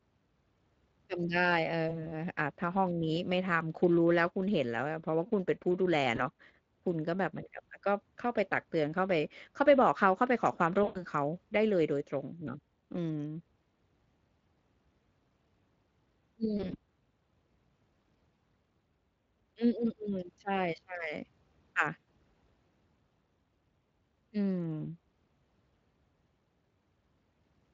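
Throughout the speech there is a plainly audible hoarse, grainy, noisy roughness. This is Speex codec damage. The CELP coder has too few bits to model the excitation properly, which fits a bitrate around 20 kbps.

At 1.89 to 2.12 s, 6.15 to 6.25 s, 10.83 to 11.05 s, 16.57 to 16.75 s and 21.99 to 22.05 s, the sound smears into a brief buzzy tone or coloured noise that fades. This is VoIP packet loss concealed by the speech codec. The decoder extrapolates its last pitch and filter over the missing audio. The gaps run from about 20 ms to about 120 ms, and the 16.6 s gap is scattered, short dropouts.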